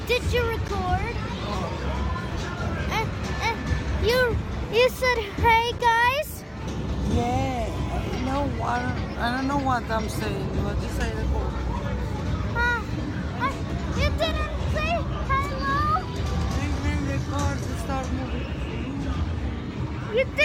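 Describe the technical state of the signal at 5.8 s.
At 5.79 s there is an underrun with held sample lasting 10 ms. The output buffer ran dry and the converter kept repeating its last value, so the waveform freezes into a flat line at whatever level it last held. That held level is what sets it apart from a zero-filled dropout, which would click on entry. Here the sound simply stalls, then resumes where it left off with essentially nothing lost, so the restart is soft rather than a sharp click.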